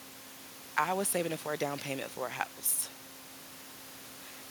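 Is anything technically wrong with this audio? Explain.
No, nothing in this speech clip points to a technical fault in the recording or playback chain. A low background noise from the room sits about 15 dB below the speech, and it belongs to the recording space rather than the system.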